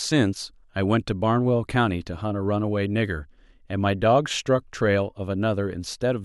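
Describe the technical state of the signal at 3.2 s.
At 3.2 s the signal is intact, with no audible fault at that moment.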